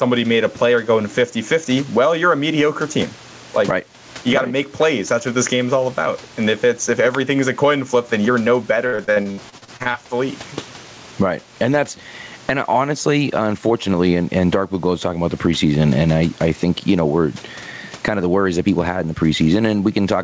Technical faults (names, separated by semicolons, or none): gain pumping; repeated packet loss (robotic sound)